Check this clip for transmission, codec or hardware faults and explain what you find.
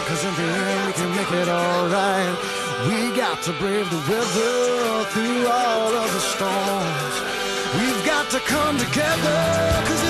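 I found no transmission, codec or hardware faults in this clip.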